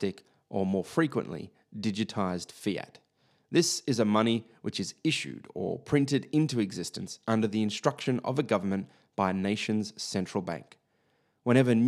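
The speech signal comes through intact and continuous, with no technical faults to report.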